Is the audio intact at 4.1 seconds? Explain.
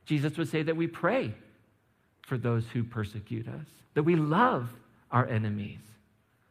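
Yes, the speech at 4.1 seconds plays through intact, with no audible fault at that moment.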